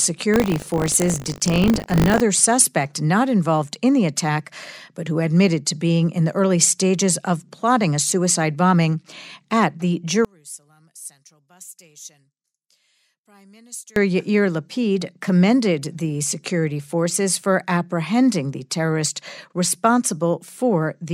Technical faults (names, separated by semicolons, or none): buffer tearing; one channel inverted